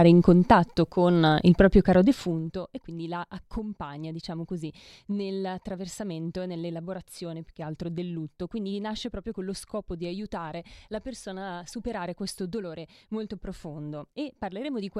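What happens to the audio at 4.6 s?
At 4.6 s the speech is intact, with no fault.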